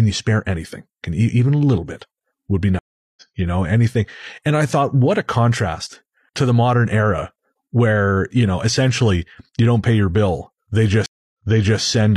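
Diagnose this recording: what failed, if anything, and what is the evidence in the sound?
Two stream reconnects, so it's the network stage. At 2.79 to 3.22 s the speech drops out for 375 ms and picks up about 0.2 s further on. At 11.06 to 11.80 s a 278 ms gap resumes 464 ms earlier, replaying audio the server resent after the connection restarted.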